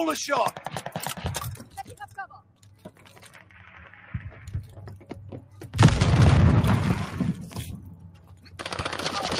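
A noise suppressor built for speech was applied to music or sounds and runs through the whole clip. It reads steady tones, ambience and decay tails as noise, so the gain swings by something like 15 dB. Attacks pass through while sustained material pumps and thins.

Sound cut by the noise suppressor appears at 1.63–2.17 s, 2.34–3.68 s, 4.97–5.12 s, 5.41–5.67 s and 7.79–8.6 s, with drops of about 8 to 11 dB. Held portions sink and tails end early. The longest dip, near 2.3–3.7 s, lasts around a second.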